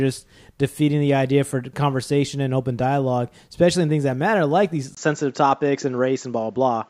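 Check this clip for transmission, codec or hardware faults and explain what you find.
There's one fault here: the input switched to a poorer device at 4.95 s and stays that way to the end. Right at the switch there's a 20 ms dropout, and after it the speech loses everything above 7.6 kHz, so it sounds duller and a bit boxier. A faint new background noise sits well below the speech, while loudness stays about the same. The likely cause is the system swapping to a different microphone or a headset's call profile partway through.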